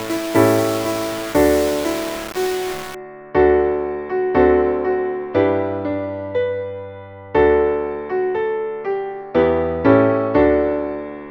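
From 0.00 to 2.95 s, low bit depth without dither leaves grainy, signal-following distortion, likely from rounding to 5 bits; the waveform shows coarse steps and the spectrogram shows broadband hash.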